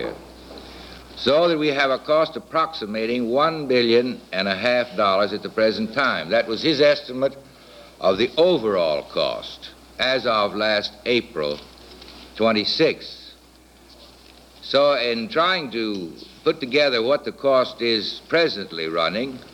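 No faults can be heard anywhere in this recording.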